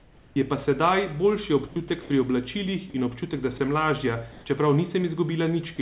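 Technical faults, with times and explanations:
0.00–0.36 s, 1.68–1.76 s (after "pa sedaj boljši"), 2.02–2.10 s (before "pri oblačilih in občutek") and 4.32–4.46 s (after "občutek da sem lažja"), comfort noise in place of the background: the pauses turn into steady, featureless hiss, shifted about −3 to +6 dB from the real room noise. The likely cause is discontinuous transmission, with the receiver synthesising noise while the sender stays silent.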